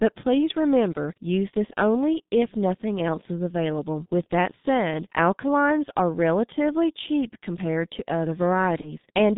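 Throughout, the speech sounds muffled and hoarse, with smeared consonants and nothing outside roughly 150 Hz to 3.7 kHz. This is heavy G.723.1 codec damage: a slowly updated voice model coded at a rate that points to about 6 kbit/s.

From 8.81 to 8.95 s, the speech turns into a buzzy tone or coloured noise that fades, and stays weak or distorted after the gap. This is VoIP packet loss concealed by the speech codec: about 30 ms of audio went missing, and the decoder extrapolated its last pitch and filter.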